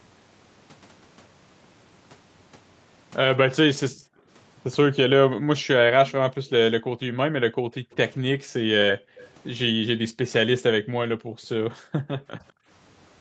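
In this speech recording, the echo canceller clamped down on the microphone while the loudspeaker was playing. This background gating pulls the room sound down by as much as about 40 dB at 3.9–4.28 s, 6.32–9.18 s, 9.72–10.19 s and 10.8–12.68 s, so the ambience dips or vanishes before returning. There are also two brief scraps of delayed sound, each trailing the original by 200 ms: one roughly 35 dB under the speech at 7.91–7.96 s and a stronger one, still roughly 25 dB under the speech, at 9.18–9.29 s. These are likely echo leak, where the canceller let part of the loudspeaker pickup pass back into the call.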